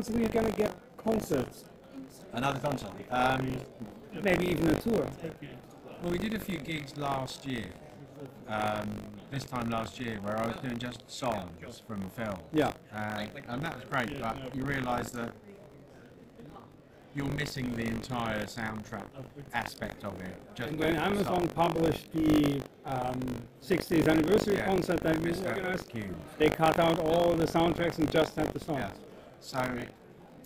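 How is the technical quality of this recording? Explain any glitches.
The recording has a persistent technical fault, buffer tearing, which lasts for the whole clip. The software writing the ring buffer and the hardware reading it have slipped out of step, so they cross inside every period. Roughly a tenth of each buffer holds audio from about 70 ms earlier, joined with hard edges on both sides. Repeating at 50 Hz, which fits a 20 ms buffer period, this produces a continuous robotic buzz that appears only while sound is present.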